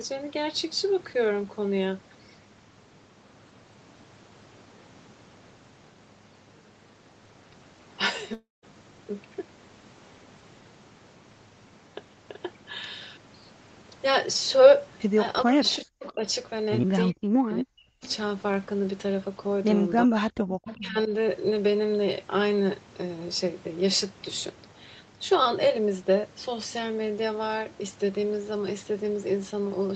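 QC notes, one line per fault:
8.33–8.65 s, long network dropout: about 0.3 s of speech never arrives. The receiver stretches the last sound into a fading buzz for roughly the first tenth of a second, then leaves near-silence for about 0.18 s before speech resumes with the gap simply missing. This is likely a burst of lost packets.
15.44–16.24 s, 17.11–18.04 s, 20.05–20.13 s, 20.29–20.53 s and 20.75–21.11 s, speech suppressed in double talk: the voice dips sharply or breaks into pieces, falling by roughly 40 dB at worst and by about 15 dB in the last stretch. This is likely an echo canceller turning the talker down while the far side also speaks.
15.65–15.76 s, 16.04–16.09 s and 20.64–20.76 s, echo leak: short, faint scraps of the voice return 0.38 s late, sitting roughly 15 to 25 dB below the direct speech. The likely cause is that the far end's echo canceller let loudspeaker pickup through its microphone, so those scraps were sent back.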